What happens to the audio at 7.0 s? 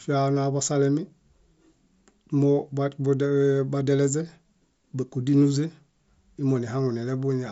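At 7.0 s the speech comes through intact, carried by the Bluetooth mSBC headset codec with its usual wideband limit, with nothing above about 7.7 kHz.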